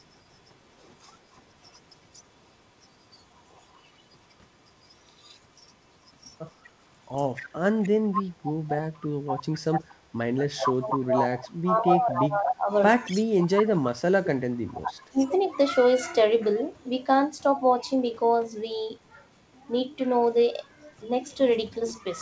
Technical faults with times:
0.00-2.22 echo leak
2.81-11.37 echo leak
9.47-9.51 speech suppressed in double talk
10.40-15.29 speech suppressed in double talk
12.20-13.89 echo leak
14.77-15.25 echo leak

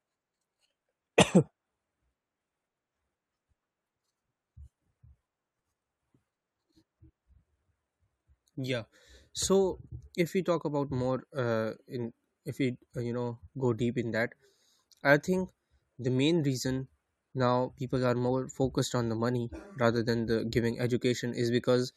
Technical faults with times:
none

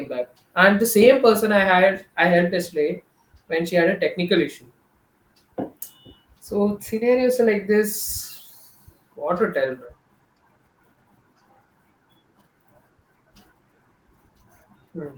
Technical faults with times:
none

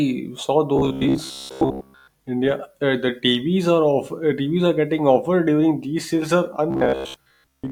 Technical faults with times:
0.76-2.08 robotic sound from repeated short buffers
6.71-7.71 robotic sound from repeated short buffers

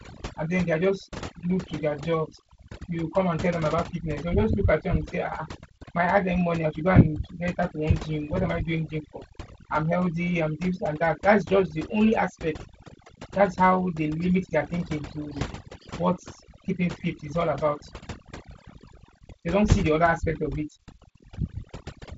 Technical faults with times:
0.00-22.17 overdone noise removal

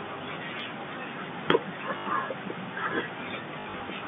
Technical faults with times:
1.98-2.06 packet loss with last packet repeated
3.60-3.80 packet loss with last packet repeated

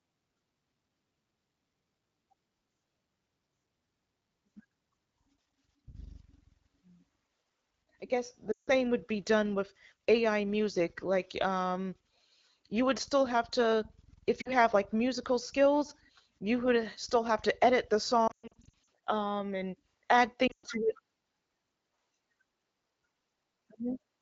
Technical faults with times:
8.51-8.75 lost AMR speech frames
14.41-14.52 lost AMR speech frames
18.27-18.74 lost AMR speech frames
20.48-20.67 lost AMR speech frames

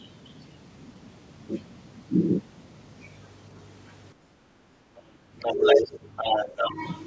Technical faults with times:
4.14-4.88 background gated by the echo canceller
5.16-5.29 speech suppressed in double talk
5.39-5.91 other side's voice leaking through
5.75-5.99 speech suppressed in double talk
6.16-6.70 other side's voice leaking through
6.46-6.81 speech suppressed in double talk

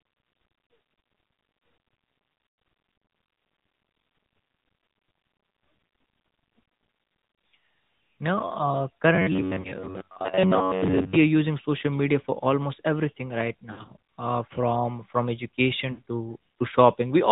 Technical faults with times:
0.00-17.32 AMR narrowband mobile codec
0.82 lost AMR speech frames
2.46-2.58 lost AMR speech frames
9.15-11.16 robotic sound from repeated short buffers
9.62-9.70 lost AMR speech frames
13.72-13.94 lost AMR speech frames
15.92-16.02 lost AMR speech frames

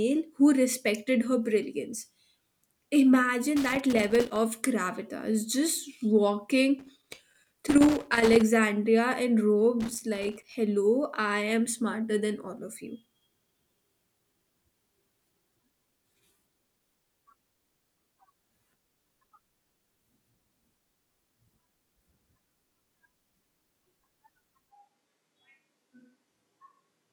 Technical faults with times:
3.56-4.36 loose connector crackle
6.79-8.42 loose connector crackle
9.80-10.55 loose connector crackle
24.73-27.12 switch to a distant microphone

